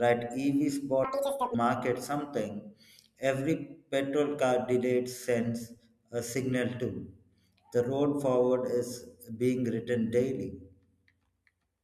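At 1.04 s the speech suddenly lurches into fast-forward and stays that way until 1.54 s. That half second is audio read two samples at a time, so it plays at double speed and jumps a full octave, 12 semitones, higher. Whatever read the stream treated each pair of samples as one frame, as if it expected two channels or wider samples, so it got through the data twice as fast.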